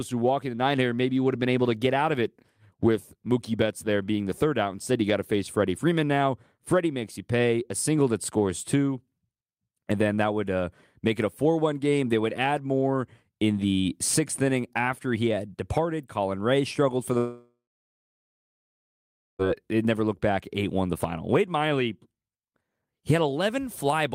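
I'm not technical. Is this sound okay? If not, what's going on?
No. From 17.17 to 19.42 s the speech turns into a fading buzz, then nearly two seconds of silence, and resumes with a piece lost, likely a long network dropout.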